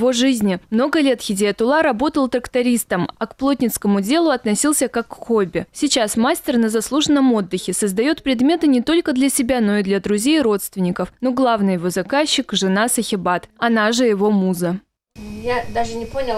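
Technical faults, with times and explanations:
Nothing stood out as a technical problem on listening through the audio.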